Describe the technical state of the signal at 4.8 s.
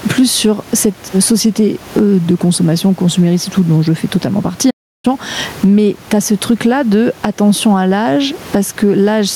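The player was likely starved of data or had its thread blocked, so a playback stall silences the output from 4.70 to 5.05 s, right after "je fais totalement partie". The speech cuts off mid-flow for about 0.33 s before resuming.

Across this moment the input gain is likely set far too high, with a fast limiter clamping it on each loud syllable. That produces gain pumping with a swing of around 15 dB, leaving the level squashed.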